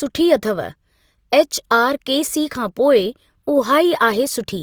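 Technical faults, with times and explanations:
Throughout, Opus compression: the speech sounds rough and grainy, with tones turned noisy, likely Opus in CELT mode filling starved bands with noise, which fits about 24 kbps.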